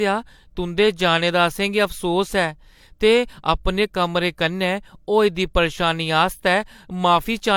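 Across the whole speech clip, the sound carries layered compression artefacts, with the artefacts of each codec heard together. This likely comes from transcoding between lossy codecs, where an MP3 stage near 96 kbit/s was re-encoded as HE-AAC near 48 kbit/s, each pass adding its own damage. On a spectrogram, energy stops flat at about 20.4 kHz.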